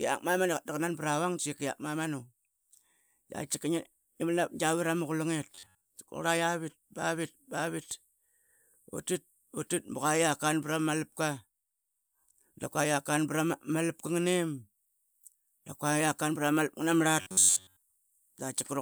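Speech that turns into a rigid, metallic buzz near 94 Hz from 5.55 to 5.90 s and again from 17.21 to 17.82 s. This is robotic sound from repeated short buffers, likely caused by an 11 ms block being replayed in place of the real audio.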